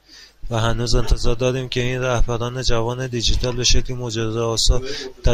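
Nothing technically wrong turns up anywhere in this short bit of speech, so there's no fault to point to and no cause to trace.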